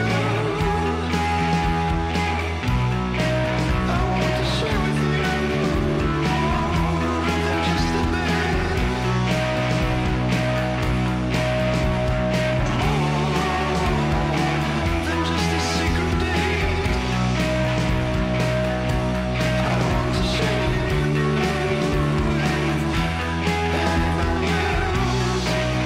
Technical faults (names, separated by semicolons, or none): loud pop